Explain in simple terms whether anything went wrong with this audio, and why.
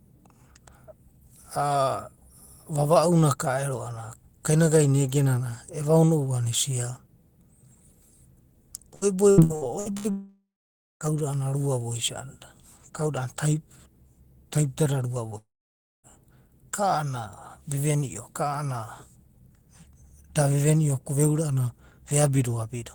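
Yes, three things went wrong in this speech clip. From 8.95 to 10.08 s there is repeated packet loss (robotic sound): the stream breaks six times in quick succession, with the longest gap about 69 ms. Each gap is filled by stretching the sound just before it, so about a third of that stretch is patched-in guesswork, which is why it sounds choppy and mechanical with bits missing.

Right after, from 10.10 to 11.08 s, comes a long network dropout, likely caused by the connection stalling for nearly a second. The last sound smears briefly into a fading buzz, then about half a second of silence follows before speech resumes with that portion simply gone. The same happens again from 15.38 to 16.06 s: a short fading tail, roughly 0.57 s of silence, and the missing audio never returns.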